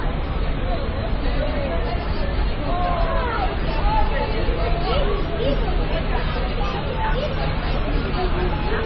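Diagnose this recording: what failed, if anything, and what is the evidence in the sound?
The failure is at the codec stage, likely transcoding between lossy codecs. Nothing reaches above 5.8 kHz for the whole clip, and the layered artefacts point to an MP3 at very low bitrate, re-encoded through AAC and then Opus, with each pass stacking its own damage.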